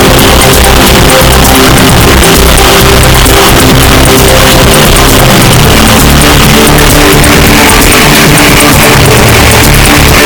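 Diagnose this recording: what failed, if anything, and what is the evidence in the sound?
The fault sits at the sample-format conversion stage. From start to finish, about 10 s, the audio is buried in dense, loud distortion, and quiet passages come out as loud as strong ones. The likely cause is signed and unsigned mixed up, in what sounds like 8-bit data. Reading the samples with the wrong convention flips the top bit, so every zero crossing becomes a jump across the whole range. Low-level sound no longer sits near zero.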